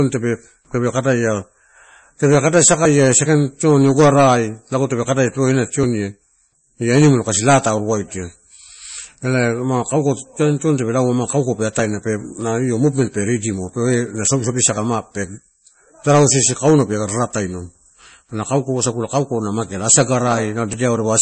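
Speech with nothing above 8.4 kHz and a smeared, swirly codec texture. That points to low-bitrate audio saved at a high bitrate, likely a 32 kbit/s MP3 re-encoded far higher. At 14.77 s, a tiny sliver of sound, roughly 20 ms, drops out and the edges butt together. This is audio missing between chunks, likely from processing in 3-second blocks.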